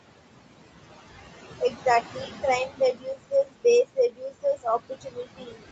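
Speech recorded with room noise sitting about 11 dB below the voice, passed through a call path whose output stops at 8 kHz. Noise suppressor artifacts run throughout: the suppressor pulls the steady background down by about 19 dB frame by frame, so the noise drops away between phrases and rises back under the voice. Speech cut by the noise suppressor occurs where the processing mistakes parts of the voice for noise and attenuates them with the background. This happens at 1.59–1.86 s (dips of about 16 dB, roughly a tenth of a second in total), 2.13–2.44 s (about 14 dB, again around a tenth of a second), 2.66–3.65 s (about 22 dB, about half a second in total), and from 3.85 s to the end (about 20 dB), leaving those stretches faint and swallowed.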